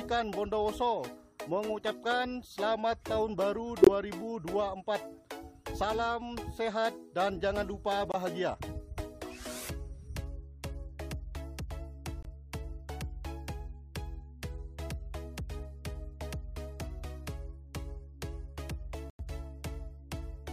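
Abrupt dropouts to silence cut in at 3.82 to 3.89 s, 8.12 to 8.16 s, 12.23 to 12.25 s and 19.10 to 19.21 s, with the timing intact afterwards. This is a corrupt frame muted fault: damaged compressed frames were rejected by the decoder and replaced with silence, leaving gaps that span one or several frames.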